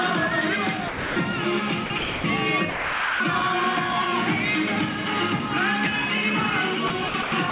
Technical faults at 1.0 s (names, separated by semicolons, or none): sound dropped by the voice detector